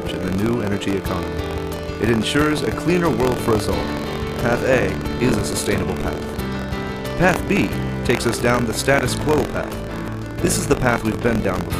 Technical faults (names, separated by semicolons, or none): buffer tearing